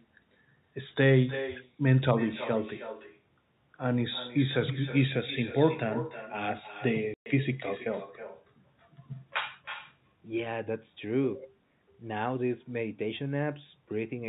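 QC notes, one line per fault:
Throughout: echo with no canceller. Every phrase is followed by a second, quieter copy about 13 dB down, arriving roughly a third of a second later. The far end is playing the call through a loudspeaker, its microphone is picking that sound up again, and nothing on the path subtracts it before it returns. The round trip across the network sets the lag. The room and the loudspeaker make the copy thinner than the original, so it smears each phrase.
7.14–7.26 s: packet loss filled with silence. A 120 ms hole cuts straight through the speech, which fits six consecutive 20 ms packets going missing. The receiver had nothing to play for that stretch and inserted digital silence rather than concealing the gap, so the sound stops dead and restarts abruptly. Both edges are hard discontinuities in the waveform. The band limit of the G.711 telephone coding sits underneath this but does not cause the gap.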